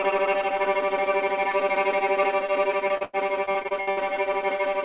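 From 2.88 to 3.99 s, repeated packet loss (robotic sound) breaks up the sound over nine gaps, the longest about 86 ms. Each missing stretch is patched by extending the preceding audio, so roughly a third of the span is synthetic fill, giving a choppy texture with pieces missing. The band stops at 4 kHz throughout, which points to a narrowband call path.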